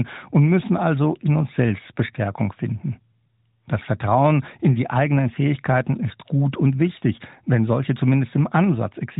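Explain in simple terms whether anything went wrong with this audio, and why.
Nothing went wrong here: the speech simply comes through a standard narrowband mobile-phone codec (AMR), which by design carries nothing above 3.8 kHz, so it has that familiar phone-call sound rather than any fault.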